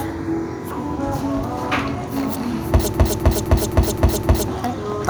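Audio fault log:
2.94–4.48 s, broken-record loop: a 259 ms fragment of the sound repeats exactly, back to back, six times, replacing whatever should have played there. The seamless identical repeats likely come from a stalled player or stream resending its last buffered fragment.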